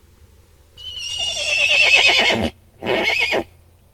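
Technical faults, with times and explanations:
No technical faults can be heard; the signal stays continuous and steady at every point.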